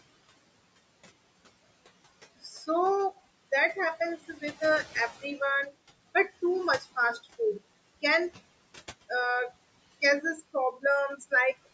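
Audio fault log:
Throughout: noise suppressor artifacts. The room's background noise, which sits about 19 dB below the speech, is pulled down by about 20 dB in the gaps, then lets through again once speech returns, so the noise floor pumps with each phrase. On a spectrogram this shows as dark, near-empty gaps between the phrases. The whole image stops at 8 kHz, which is consistent with call microphone processing.
10.72 to 10.84 s: speech cut by the noise suppressor. For roughly a tenth of a second the suppressor mistakes part of the speech for noise and turns it down along with the background, by about 13 dB at its deepest. The affected sound comes across as swallowed and faint, like a consonant or word ending that never quite arrives. On the waveform the envelope dips, and on a spectrogram the speech energy there fades into a short, hollow notch.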